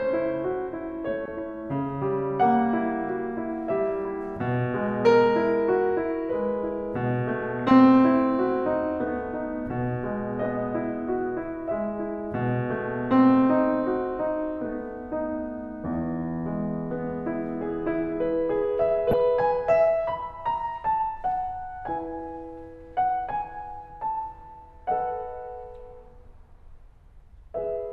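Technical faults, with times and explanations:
1.25–1.28 s, 7.59–7.73 s and 19.11–19.14 s: DAB burbling. Brief noise blips break into the music as bit errors slip past error correction into the MP2 data. Corrupted samples put short blips of noise in single sub-bands, and corrupted scale factors make sub-bands jump in level for up to a frame. This fits a handful of damaged frames per burst at a bit error rate of roughly 0.1 to 0.2 percent. Unlike a dropout, the sound is garbled rather than cut. Unlike steady low-bitrate swirl, the garble arrives in short bursts.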